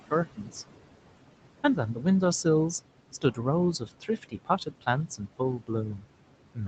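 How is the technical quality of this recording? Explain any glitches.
The recording has two connected problems, both from aggressive noise suppression on a speech track whose room noise sits about 14 dB below the voice.

Noise suppressor artifacts run through the whole clip. The background drops away between phrases and creeps back under the speech. The suppressor lowers bands it judges to be steady noise, cutting them by about 18 dB, frame by frame.

Speech is cut by the noise suppressor in two places. From 0.36 to 0.54 s, roughly 0.2 s of speech sounds swallowed, dropping by up to about 16 dB. Between 3.79 and 4.87 s, around 0.4 s in total goes faint, dipping by up to about 17 dB. In both places the suppressor mistook soft speech energy for background and turned it down with the noise.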